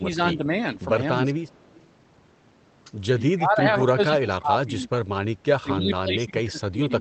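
The speech starts dipped. From 0.0 to 0.21 s the level falls, by roughly 15 dB at its worst. A lighter dip follows from 0.37 to 0.49 s, only a few decibels deep. From 1.17 to 1.52 s the voice drops by about 20 dB. These are speech suppressed in double talk. The likely cause is the echo canceller mistaking the talker for loudspeaker echo while both sides spoke, and turning the voice down.

From 1.55 to 1.8 s an echo leak is heard. A faint, delayed copy of the voice trails the original by 220 ms. It sits about 30 dB below the speech. It is likely the far end's loudspeaker echo slipping past its canceller and returning.

The suppression returns, heavier. From 3.32 to 4.9 s the voice sinks, for about a second in total and by about 25 dB at worst. From 5.44 s to the end it drops again by about 25 dB.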